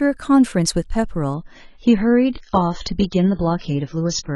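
Adaptive stream at a lower bitrate, from 1.34 s to the end: with a slowed connection, the speech switches abruptly, without a gap, to a lower-bitrate version. Nothing remains above 7 kHz and codec artefacts thicken, which fits AAC dropping from 96 to 16 kbit/s.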